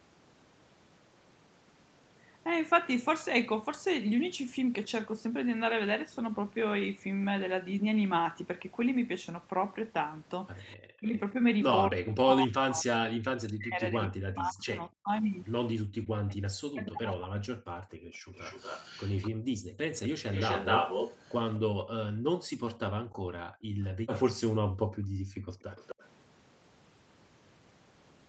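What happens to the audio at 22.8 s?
Background gated by the echo canceller, 21.68 to 25.65 s: while the loudspeaker plays it cuts the microphone about 40 dB. Room tone drops out for about two seconds in all, seen as flat waveform stretches and blank spectrogram gaps.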